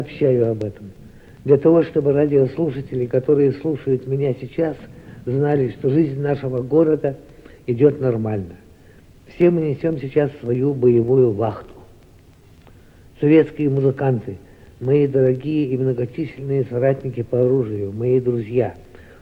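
From 1.09 s to 17.76 s, a short click recurs every 1.67 s, about ten in all. This points to clock drift buffer slips, likely from two devices whose clocks differ by around 100 ppm, forcing a handful of samples to be dropped or repeated at each slip.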